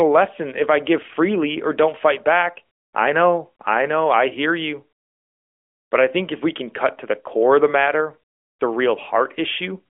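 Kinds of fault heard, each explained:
Nothing stood out on listening to this speech, which comes through a narrowband mobile line with nothing heard above about 3.6 kHz.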